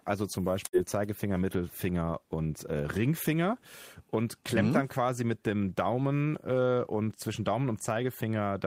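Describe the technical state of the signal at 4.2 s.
At 4.2 s the speech signal is intact, with no audible fault at that moment.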